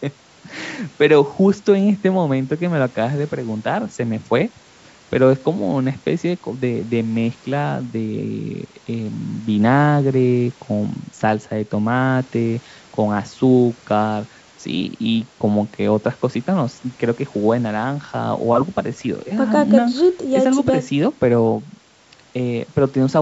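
No technical faults occur anywhere in this speech clip, which has passed through a call's microphone processing as normal.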